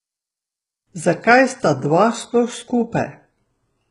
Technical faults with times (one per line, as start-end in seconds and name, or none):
0.00-3.90 HE-AAC compression